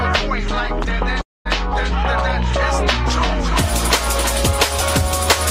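The audio cuts out from 1.21 to 1.47 s. The sound just before the gap smears into a fading buzz, then drops to near silence for about 210 ms, and the audio resumes further on with roughly 240 ms of material simply gone. This is likely a long network dropout: packets stopped arriving, the receiver stretched the last sound to cover the hole, gave up, and then skipped ahead without recovering the lost stretch.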